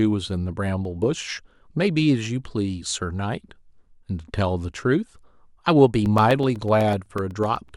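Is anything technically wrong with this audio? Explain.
Yes. From 6.06 to 7.69 s the speech has periodic USB or driver dropouts: about fifteen ticks, exactly 0.125 s apart, each a gap of a couple of milliseconds filled with silence as the audio driver stalls. Their strict clockwork spacing separates them from random clicks or crackle.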